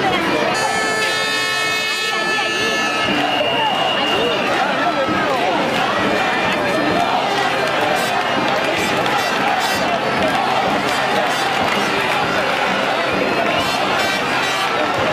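Damaged data in a compressed stream: corrupted bytes make the decoder misread frames and lose sync while it hunts for the next frame header. Each break is a brief chirp or blip in the audio, at 0.54, 3.39 and 11.66 s.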